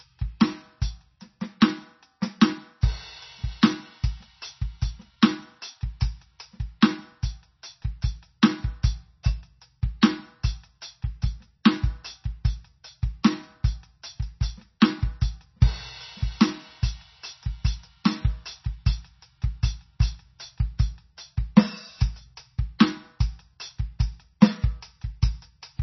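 Throughout the music, nothing is audible above 5.9 kHz and the sound is watery and swirly. The likely cause is heavy MP3 compression at a bitrate as low as 24 kbps. Short pre-echo hiss smears the attacks at 6.81, 14.80, 22.79 and 24.41 s, where block-wide quantisation noise spreads up to 16 ms ahead of each attack.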